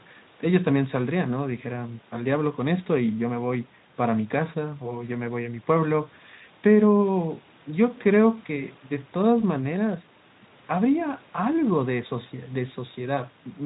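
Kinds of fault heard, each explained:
No faults can be heard in the speech, which has the lowest bass taken out, as expected from call microphone processing, and is carried by the Speex codec at 15 kbps.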